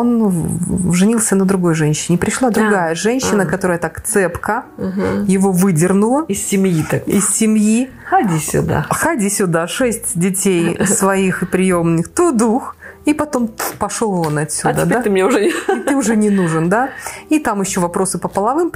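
No technical faults are audible anywhere in the recording.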